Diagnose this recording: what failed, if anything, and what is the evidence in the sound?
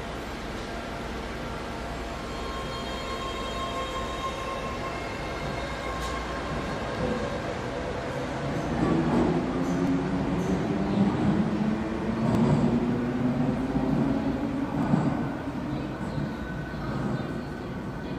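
The recording stage likely loses a sliver of audio at each 2.5-second chunk handover: audio missing between chunks. Brief skips of around 20 ms fall at 4.92, 7.40, 9.87, 12.35 and 14.83 s, with the surrounding sound spliced directly together.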